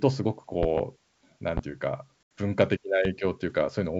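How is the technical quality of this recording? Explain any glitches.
The recording has two kinds of fault: loud pops at three points and one packet-loss dropout, all heard over the G.722 wideband telephone coding, which itself adds little audible damage.

Loud pops come first at 0.63 to 0.81 s, a pair of them, peaking about 10 dB above the speech, then single pops at 1.57 s and 3.05 s, each about 15 dB above it. A sudden voltage step or pulse, likely from a plug, switch, static discharge or driver glitch, is added to the signal, and the downstream circuitry shapes it into a sharp thump while the speech carries on beneath.

Packet loss on an ADPCM call occurs from 2.23 to 2.31 s. About 80 ms of data went missing, which points to several consecutive packets. The receiver filled the gap with silence, so there is an abrupt, hard-edged hole. The decoder's adaptive predictor and step size then no longer match the sender's, so the speech comes back with some distortion until the decoder resynchronises.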